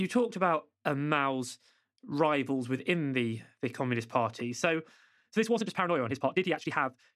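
From 5.14 s to the end, the speech suddenly runs 1.48 times faster at unchanged pitch, rushed. That points to a likely time-stretched section rather than a sped-up playback, which would raise pitch.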